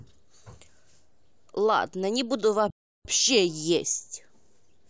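A playback stall occurs from 2.70 to 3.05 s: the speech cuts to silence mid-flow for about 340 ms, then resumes. The likely cause is the player running short of data or its output thread being blocked, leaving nothing to play until it recovered.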